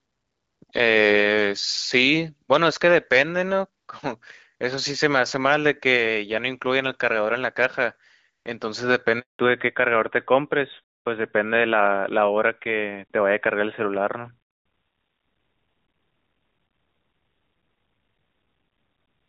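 At 9.19 s there's a handover gap. The call jumps networks, the voice cuts out abruptly, and there's a 200 ms hole of silence until 9.39 s. Right after that, from 9.39 s to the end, you get a fallback to narrowband. The clear HD Voice sound, which fits AMR wideband at around 12.65 kbit/s, drops to AMR-NB, so everything above 4 kHz is gone and the speech turns dull and boxy.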